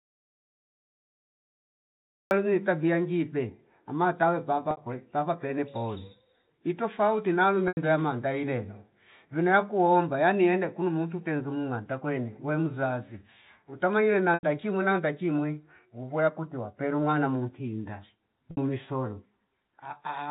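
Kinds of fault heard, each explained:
Audio dropout to silence: The clip opens in dead silence lasting until 2.31 s, with no room tone at all. That points to silence being written, likely from a lost input or a stray mute. Unlike concealed packet loss, nothing bridges the gap.
Packet loss with pitch repetition: Within the narrowband telephone sound, brief buzzy holds occur at 4.71, 7.68, 14.34 and 18.51 s, lasting 60, 90, 90 and 60 ms. The receiver repeated the last pitch period over missing packets, fading it out, so each hold fades into silence before the speech returns with a short cross-fade.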